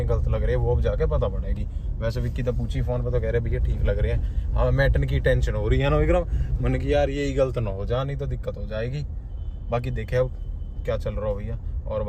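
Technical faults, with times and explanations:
Nothing here stands out as a technical problem; the audio sounds fine all the way through.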